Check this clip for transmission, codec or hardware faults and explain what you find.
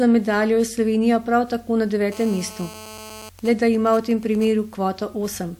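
There are two hardware-side interference faults here, both from a 2G phone sitting close to the audio gear.

From 2.12 to 3.29 s, right after "prav tako na", there's GSM phone buzz. The handset is in a call, pulsing its transmitter 217 times a second, and the audio circuitry rectifies those radio pulses into a hard, raspy 217 Hz buzz full of harmonics. It sits about 18 dB under the speech and has nothing to do with it.

Then from 3.39 to 4.47 s you get GSM signalling bursts. The phone is still in the call, but its user has gone quiet, so it only sends short groups of bursts at the same 217 Hz rate. Once rectified, they come through as even ticks with a longer buzz twice a second, around 20 dB below the speech.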